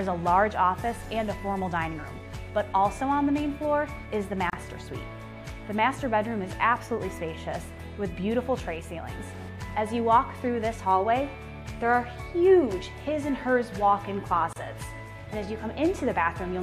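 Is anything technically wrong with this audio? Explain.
Yes. Separately encoded pieces were joined without trimming each encoder's start-up delay and final-frame padding, leaving a gap at a join of encoded pieces at 4.50 s and 14.53 s, 10 s apart. Each is a 31 ms gap with smeared edges, after which the sound resumes where it stopped.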